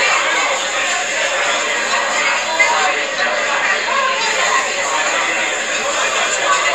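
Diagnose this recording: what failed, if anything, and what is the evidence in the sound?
Channel delay causing comb filtering dulls the sound from 2.87 to 4.26 s, likely at the driver or buffer stage. One channel lagging about two samples before mono summing cancels highs; a spectrogram shows a fixed dark notch around 10 kHz.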